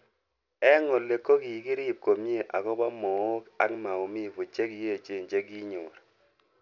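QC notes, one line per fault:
throughout, aliasing: a rate drop without an anti-alias filter, which fits 12 kHz, folds content above 6 kHz back down, leaving gritty sibilants, with the folded content roughly 35 dB under the speech.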